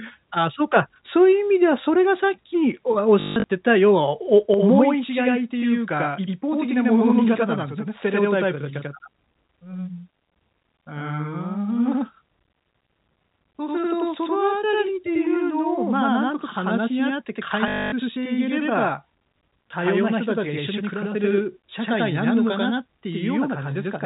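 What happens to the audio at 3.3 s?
Around 3.2 to 3.44 s there's packet loss with the last packet repeated: the last packet received gets replayed in place of the missing ones, giving a robotic stutter buzzing near 50 Hz, consistent with 20 ms packets.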